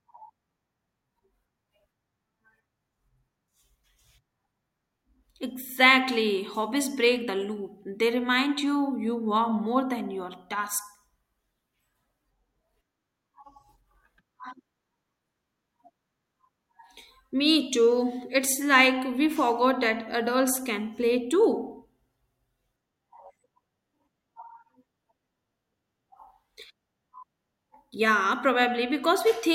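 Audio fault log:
Nothing stood out on listening to the speech in this recording.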